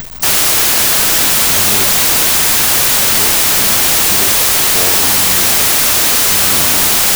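Loud hiss and crackle run from start to finish, with the speech buried beneath it, slowed to half speed and dropped an octave. This is a wrong sample width: 32-bit integer samples are read as 16-bit, so every sample splits into two values and only the upper halves carry the signal.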